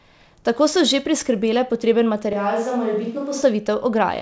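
From 2.33 to 3.42 s, just after "priskrbele potreben", the speech abruptly turns hollow and roomy, loses bass, drops about 5 dB and gains room noise. Likely a switch to a distant microphone: unlike a plain level dip, tone and room change together, at hard edges.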